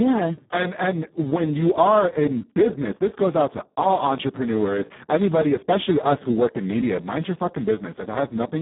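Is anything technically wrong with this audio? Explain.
Yes. Throughout the speech a Speex codec at a very low quality setting, consistent with roughly 4 kbps, strips the excitation of detail, so the voice sounds hoarse, buzzy and near-robotic. The band runs about 150 Hz to 3.6 kHz. A spectrogram shows blurred harmonics and nothing above 3.8 kHz.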